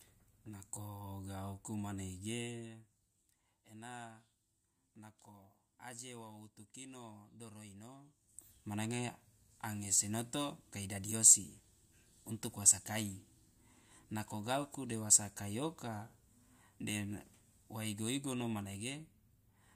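Nothing technical goes wrong anywhere in this speech recording, so there's nothing here that needs pointing out.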